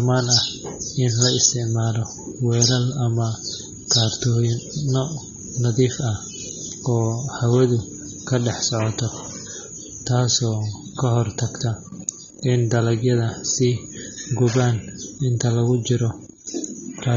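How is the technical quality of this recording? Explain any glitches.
The recording carries plainly audible AAC compression throughout. The speech sounds dull and smeared, with a warbling, fizzy texture on sibilants and sustained sounds. The likely cause is AAC-LC coding at a low bitrate, around 24 kbps, which lowers the upper cut-off, leaves gaps in the spectrum and fills some bands with substitute noise.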